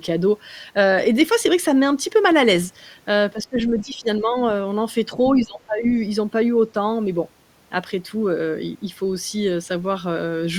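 Speech suppressed in double talk hits this speech clip three times: from 3.34 to 4.35 s, where the level dips by roughly 15 dB over about 0.7 s in total; briefly at 5.15 to 5.2 s with a shallow drop of around 5 dB; and from 5.42 to 5.86 s, where it falls by about 20 dB. The likely cause is an echo canceller mistaking overlapping far-end talk for echo and attenuating the near-end voice along with it.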